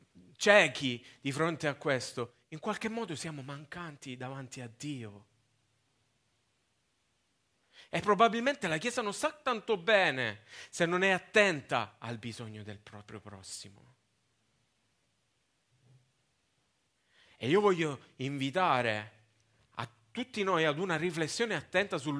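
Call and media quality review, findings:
No faults found: the speech signal shows no audible dropouts, level disturbances, timing irregularities or added noise at any point.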